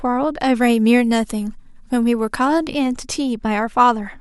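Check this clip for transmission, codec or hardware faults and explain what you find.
Pre-emphasis left on from 0.61 to 2.67 s: the treble boost, which fits an FM-style 50 µs curve, was never undone, so the speech sounds thin and sibilant, about 10 dB hot at 10 kHz.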